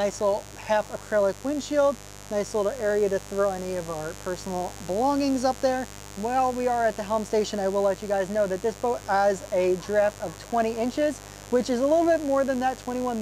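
Throughout, a steady, raspy mains buzz sits about 20 dB below the sound; 50 Hz switching spikes paint evenly spaced harmonic lines across the spectrogram.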